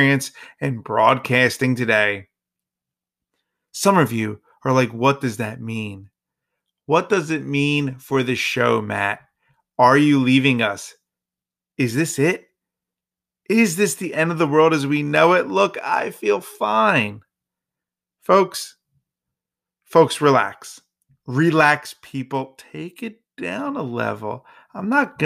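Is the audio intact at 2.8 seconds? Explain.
Yes, the speech at 2.8 seconds is intact, with no audible fault at that moment.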